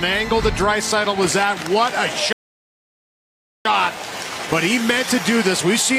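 A rebuffering stall interrupts this audio clip from 2.33 to 3.65 s: the player exhausted its downloaded audio and fell silent for about 1.33 s until more data arrived, then resumed exactly where it stopped, so nothing is lost but that time is added.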